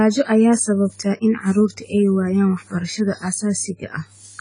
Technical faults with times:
0.00-4.41 AAC compression

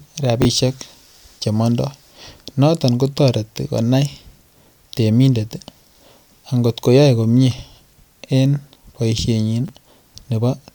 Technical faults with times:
0.42-0.45 chunks out of order
9.65-9.69 chunks out of order

